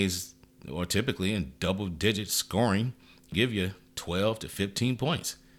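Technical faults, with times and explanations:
3.32 s, damaged data in a compressed stream: a brief blip cuts into the speech. Corrupted bytes threw the decoder out of sync until it found the next frame.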